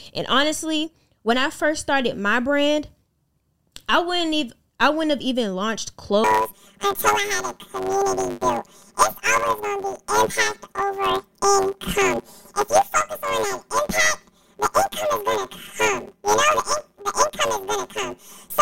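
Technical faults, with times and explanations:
6.24–18.61 s, planar audio read as interleaved: from just after "wouldn't have even launched", 10 ms blocks of all-left-then-all-right samples are taken as alternating pairs, so each block plays twice at double speed, giving a robotic buzz at 100 Hz with no clear octave shift.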